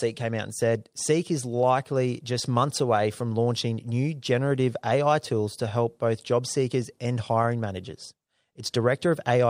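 No technical faults can be heard anywhere in the speech.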